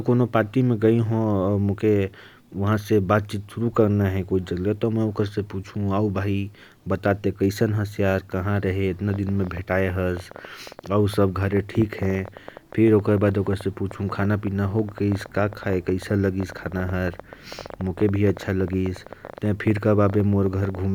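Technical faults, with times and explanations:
9.10–20.80 s: train of clicks. A rapid ticking runs over the speech and through its pauses, roughly 150 same-shaped clicks at about 10.9 per second, unevenly spaced, peaking about 5 dB above the signal; likely interference from nearby equipment or a faulty connection or power supply.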